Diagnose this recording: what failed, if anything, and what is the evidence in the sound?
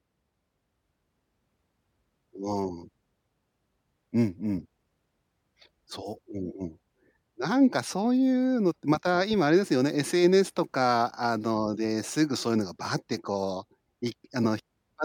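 Nothing in the recording points to any failure.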